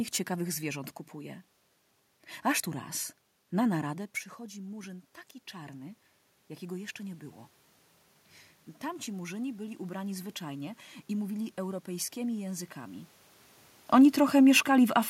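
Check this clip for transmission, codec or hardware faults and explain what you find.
One fault is audible, an automatic gain rise. From 3.89 to 6.08 s, after "tu raz na" and before "jakiego jeszcze nie było", the talker moves back and the input drops about 14 dB. The automatic gain control responds by slowly raising its gain about 4 dB, so voice and room noise swell together. On the waveform the envelope creeps upward over those two seconds. On the spectrogram the noise floor brightens across all frequencies along with the voice.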